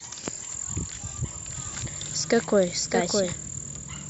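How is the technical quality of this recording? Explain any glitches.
The recording has one glitch, a doubled audio track. From 1.48 s to 3.32 s a second copy of the speech runs about 0.7 s behind the original, roughly 5 dB quieter. A second capture path or an edit holding two offset copies is the likely cause. Unlike an echo or reverb, the copy has full bandwidth, no decay and no room colour, and it cuts in and out abruptly.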